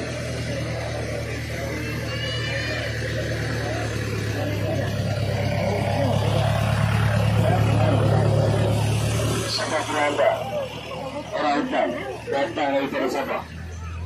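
No audible technical faults.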